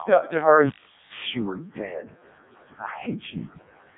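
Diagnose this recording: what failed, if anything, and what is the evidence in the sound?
The failure is at the codec stage. Across the whole clip the speech has the robotic, buzzy quality of the Codec 2 vocoder. Nothing is present above 3.8 kHz. The damage is heavy, which fits its lowest 0.7 kbit/s mode. The waveform itself was never transmitted. Only pitch, voicing, energy and a coarse spectral envelope got through. The decoder then rebuilt the voice from sine waves, so natural texture is replaced by a synthetic tone.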